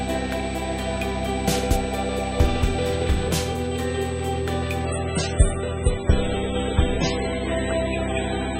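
A thin, steady whine at a fixed 8 kHz runs under the sound for the whole clip, roughly 25 dB below it. This is USB whine: the bus draws current in 125 microsecond microframes, and that pulsing leaks into the audio through shared power or ground.

From 4.85 s to the end, the sound abruptly turns duller and more smeared, with nothing above 9.7 kHz and no gap at the switch. This is an adaptive stream at a lower bitrate: the connection slowed and playback moved to a much leaner encode, consistent with a step from 128 to about 16 kbit/s MP3.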